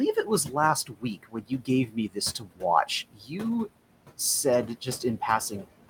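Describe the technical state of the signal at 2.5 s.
At 2.5 s the speech turns faint and swallowed, sinking by about 19 dB for around a fifth of a second within 2.39 to 2.63 s. This is speech cut by the noise suppressor: it mistook that stretch of speech for background and turned it down with the noise.

Underneath, noise suppressor artifacts are present throughout. The background sinks between the words and rises under them, because the suppressor lowers each band it judges to be steady noise, frame by frame, by about 18 dB, against room noise sitting about 14 dB below the speech.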